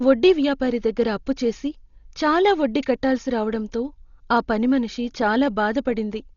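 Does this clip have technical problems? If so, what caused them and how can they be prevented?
Yes. The likely cause is heavy Dolby Digital compression at a starved bitrate, consistent with roughly 32 kbps. The encoder cuts everything above 6.9 kHz and leaves many frequency lines with no mantissa bits, so the decoder fills them with noise. Throughout the speech this gives a dull sound with a rough, fluttering haze. Encoding at a much higher bitrate keeps the full bandwidth and prevents this damage.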